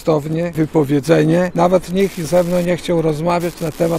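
A steady ticking runs under the sound from start to finish, about ten clicks a second, sitting roughly 25 dB below the main signal. This is Wi-Fi interference. A Wi-Fi radio close to the audio circuitry sends its beacon every 102.4 ms, and the circuit, acting as an unintended detector, rectifies each radio burst into a small audible pulse. The regular beacon timing produces that even, clock-like tick.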